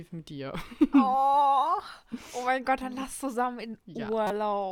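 At 4.27 to 4.31 s, a corrupt frame decoded garbles a couple of speech frames into a brief chirpy burst near -20 dBFS.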